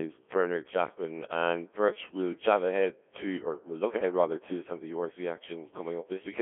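Throughout, the speech has Codec 2 vocoder damage: only pitch, voicing and envelope survive, resynthesised as buzzy sine tones within roughly 250 Hz to 3.4 kHz, which fits a 1.3 kbit/s mode.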